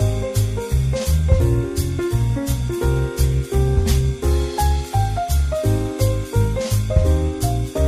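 No technical faults can be heard anywhere in it.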